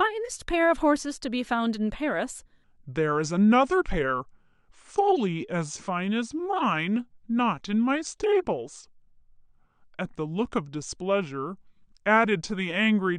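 From 2.64 s to the end, a section at the wrong speed plays at 0.814 times the original rate, likely from being fitted to the wrong clock. The speech drops about four semitones and drags. Unlike a pure pitch shift, the timing slows along with the pitch.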